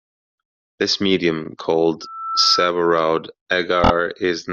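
Repeated frames first appear at 1.43 s, where a single 24 ms block of the compressed stream is decoded twice. That gives a brief stutter and stretches the speech by 24 ms.

Loudspeaker feedback squeal runs from 2.01 s to 2.73 s. The microphone is picking up the loudspeaker it feeds, and at 1.3 kHz the loop gain passes unity. That tone swells over a few tenths of a second to about 5 dB above the speech.

Repeated frames return from 3.83 s to 3.90 s. This time one 24 ms block plays four times in a row, which makes a rapid triple stutter and adds 72 ms.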